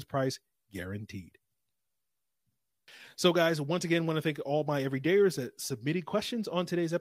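No technical faults can be heard at any point in the recording.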